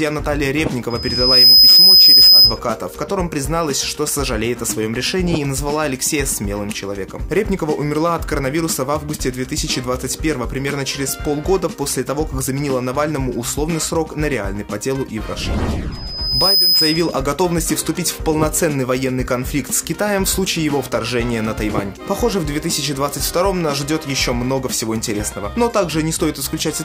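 A microphone is hearing the loudspeaker it drives, and at 5 kHz the loop gain climbs past one, causing loudspeaker feedback squeal from 0.90 to 2.60 s and again from 15.92 to 17.23 s. Each time a piercing 5 kHz tone swells, over about half a second the first time and about 0.7 s the second, towering well above the sound the first time and only slightly above it the second.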